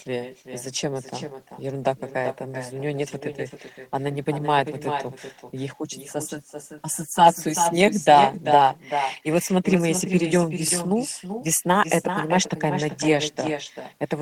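A speech recording where the far end of the call plays audio through a loudspeaker and its microphone sends it straight back, because no canceller removes it. The result is echo with no canceller throughout. Each phrase returns roughly 0.4 s later as a quieter copy, about 8 dB down, thinner than the original.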